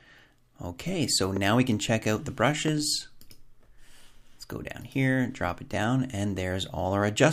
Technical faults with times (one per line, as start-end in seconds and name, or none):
1.37-1.39 loud pop
2.68-2.70 loud pop